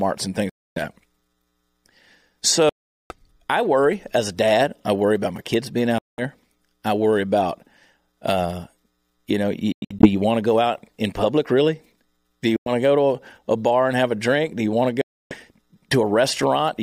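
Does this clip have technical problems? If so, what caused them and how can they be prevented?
Yes: six Bluetooth dropouts punch silent holes in the speech at 0.49, 2.69, 5.98, 9.72, 12.56 and 15.01 s, each 0.1 to 0.4 s long, with the one at 9.72 broken into short gaps. Packets likely missed the headphones, and the speech resumes as though it had kept playing. Keep the source close and the 2.4 GHz band uncluttered.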